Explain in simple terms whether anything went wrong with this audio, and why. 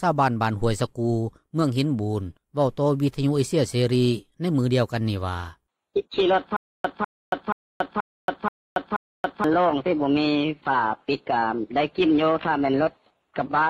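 From 6.57 to 9.44 s there's a stutter with silent gaps: a 200 ms fragment repeats six times with 279 ms of silence between, likely a stalled stream.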